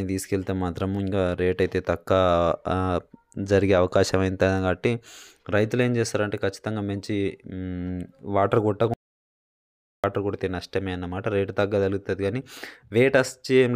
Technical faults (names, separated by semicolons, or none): audio dropout to silence